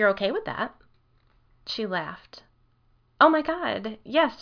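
No technical faults can be heard anywhere in the clip. The speech continues without any break, dropout or audible disturbance.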